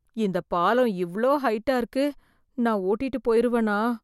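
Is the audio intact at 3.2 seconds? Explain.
Yes, at 3.2 s the speech plays through intact, with no fault present at that moment.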